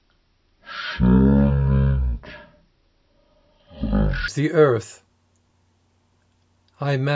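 From the start to 4.28 s, the sound is dragged down and slowed to a crawl. It runs at roughly 0.36 times normal speed, and its pitch drops by about 17.6 semitones, well over an octave, so everything sounds deep, murky and stretched. This is a wrong sample rate fault. The samples are played out at a lower rate than they were captured at, with no conversion, so timing and pitch shift together. The ratio fits 44.1 kHz material being played at 16 kHz.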